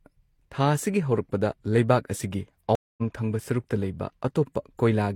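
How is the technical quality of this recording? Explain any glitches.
The recording has one clear glitch, a stream reconnect, which breaks the speech near the middle. Stream reconnect, 2.75 to 3.02 s: the connection dropped, playback went silent for about 225 ms, and the player reconnected and started a new decoder partway through the stream. Because the stream kept moving during the outage, the speech picks up again at a later point, skipping roughly 150 ms, so a short stretch is missing. The first instant after the gap fades in.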